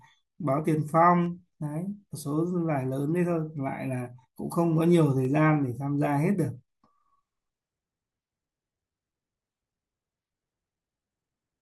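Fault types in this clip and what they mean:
Dropped samples: Three sharp, isolated clicks cut through the speech, at 1.26, 3.24 and 5.25 s. Each one is a single tick, a thin vertical line across the spectrum. The likely cause is a tiny gap in the sample stream, a small fraction of a millisecond long. The waveform jumps straight from one value to a later one. Nothing audible is missing. Only the sudden step is heard.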